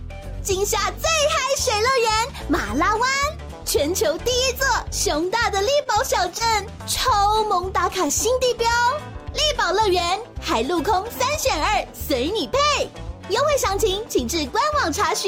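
A short stall from a late packet occurs between 5.83 and 5.96 s. The packet arrived after its playout time, the jitter buffer emptied, and the last sound was stretched by 23 ms before playback resumed where it stopped. Nothing is lost, but the sound hangs briefly with a slight buzzy dip.

Short concealed packet loss follows at 6.38 and 8.07 s. Each time, 20 ms of audio never reached the decoder, and the receiver extrapolated the preceding sound to bridge the hole before blending back in. Both spots come through as a fleeting smear or wobble.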